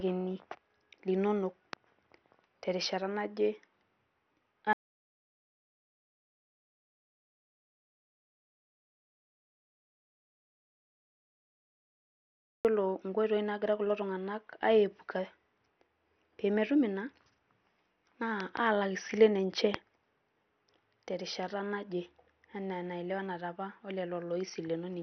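The speech has most likely been through heavy MPEG Layer II (MP2) compression at a starved bit budget, consistent with roughly 48 kbps. The encoder has switched off the upper sub-bands, so nothing survives above 6.1 kHz, and the remaining bands are coarsely quantised, leaving the speech dull, granular and gurgling throughout. The input path then appears to have been lost from 4.73 to 12.65 s, with the recorder writing silence: the audio drops out to complete silence for about 7.9 s, with no room tone, and anything spoken in that span is gone. Sudden voltage steps or glitches in the chain likely produce loud pops on top of the continuing speech. There is a single pop at 1.73 s and another at 19.74 s, each about 20 dB above the speech, and a double pop between 18.40 and 18.59 s at about 15 dB.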